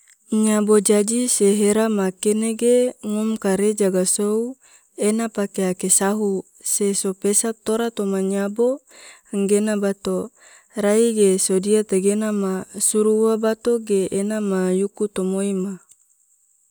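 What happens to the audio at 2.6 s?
At 2.6 s the speech carries on intact, with no audible dropout, click, distortion or other fault at that point.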